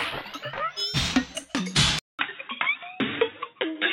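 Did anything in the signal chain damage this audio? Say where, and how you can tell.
Yes. At the input stage, from 1.99 s to the end, the sound turns dull and boxy after a 200 ms gap, with nothing above 3.8 kHz and a faint new noise floor at an unchanged level. This is likely an input switched to a poorer device. A spectrogram would show the top band cut off abruptly, and a waveform would show a brief flat line at the switch.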